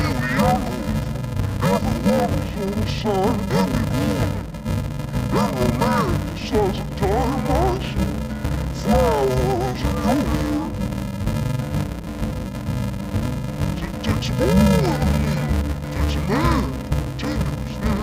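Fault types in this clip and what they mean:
Interleaved audio read as planar: The sound is dull and robotic throughout, with a steady buzz near 375 Hz and no clear drop of an octave. The stream arrives as short blocks of alternating left and right samples, about 2.67 ms each, which fits a 128-sample block. Each block is split in half, first half to left and second half to right. Both halves play at half speed, and the seam at every block boundary produces that buzz.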